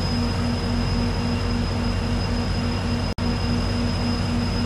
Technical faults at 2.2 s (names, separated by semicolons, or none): none